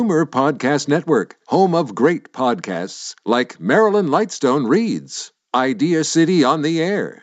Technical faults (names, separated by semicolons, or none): none